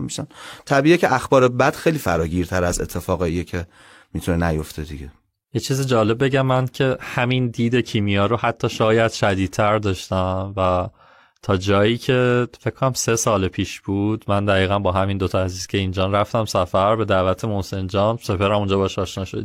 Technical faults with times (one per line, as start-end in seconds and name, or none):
none